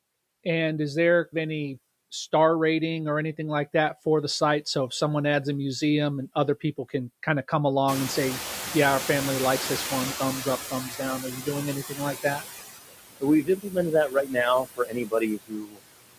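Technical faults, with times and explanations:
Throughout: noise suppressor artifacts. The suppressor is pulling steady background noise down by about 17 dB, deciding band by band and frame by frame what counts as noise. So the noise drops away in the gaps and climbs back up under the speech.
7.87–10.89 s: noise suppressor catching up. Right after "can kind of come" the room noise jumps by roughly 24 dB, around the 8 s mark, and ends up only about 10 dB under the speech. The suppressor's noise estimate lags behind that jump, so at first the louder noise comes through with only about 9 dB of reduction. It then sinks gradually over about 3 s as the estimate adapts, and you can hear the background settling down rather than stepping down.
10.89–11.00, 11.20–11.47, 11.83–12.43, 13.43–13.77, 14.08–14.36 and 14.65–15.80 s: speech cut by the noise suppressor. The suppressor mistakes parts of the speech for background. 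Softer stretches get turned down along with it, by about 9 to 21 dB at the deepest points, so syllables and word endings sound swallowed or faint. The last one is the worst, with around 0.7 s of speech pulled down by as much as about 21 dB.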